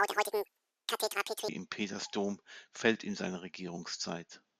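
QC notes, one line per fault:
0.0–1.49 s: audio read two samples at a time (double speed). The reader's grabbing sample pairs as single frames, so the speech runs twice as fast and jumps a full octave, 12 semitones, up.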